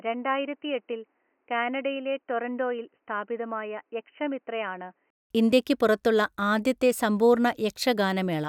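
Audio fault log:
0.00–5.30 s, input switched to a poorer device: the speech is boxy, with nothing above 3 kHz, is around 10 dB quieter, and carries its own faint noise floor, roughly 45 dB down. After a 200 ms gap, full bandwidth returns at "ഇന്ത്യയ്ക്ക് പുറത്തുള്ള ആദ്യത്തെ", likely from a changed microphone. A plain filter or codec drop would not also shift level and noise.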